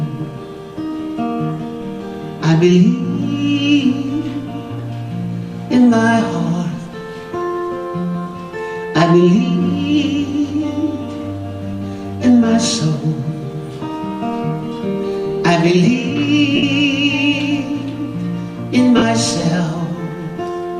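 There are two short dropouts from lost LE Audio frames, at 16.56–16.63 s and 18.97–19.02 s, 67.5 ms and 45 ms long. The LC3 decoder smears the last spectrum into noise and fades it, which fits runs of lost 7.5 ms frames. The light codec compression underneath is barely noticeable.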